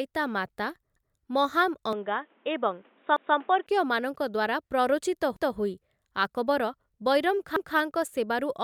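At 0.96 s a short stutter is heard as a 200 ms stretch of speech plays twice. This is overlapping chunks: the audio was handled in 2-second pieces, each starting 200 ms before the previous one ended, so the overlap repeats at every join.

From 1.93 s to 3.67 s the speech turns dull and boxy, with nothing above 3.8 kHz and a faint new noise floor well below the speech. There is no gap and no level change at either edge. The likely cause is the input switched to a poorer device, a narrower-band microphone or headset profile, before switching back.

The same doubled 200 ms stutter from overlapping chunks returns at 3.16 s, 5.36 s and 7.56 s, falling about every 2.2 seconds as each chunk boundary passes.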